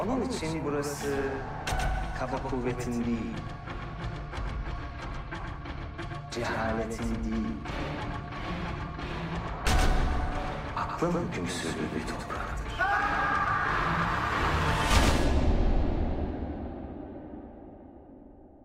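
The audio carries a doubled audio track from start to finish: a second, full-band copy trails the original by about a tenth of a second, a few decibels quieter, with no decay or room colouring. The likely cause is the same signal being captured again through a slower path or two misaligned copies in an edit.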